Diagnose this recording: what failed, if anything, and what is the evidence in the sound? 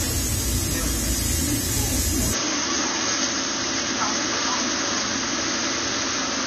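Codec stage: the whole clip stops dead at 14.1 kHz, and the high-bitrate MP3 carries the first encoding's artefacts anyway. It's likely low-bitrate audio saved at a high bitrate, pointing to an earlier AAC pass at around 32 kbit/s. The big re-encode can't restore what that first pass threw away.

Capture stage: from 2.33 s to the end, the band collapses to nothing above 6.6 kHz, and a new noise floor appears roughly 35 dB under the signal. There's no gap and no level jump at the change. That's likely the input switched to a poorer device in mid-recording, with a narrower microphone path taking over.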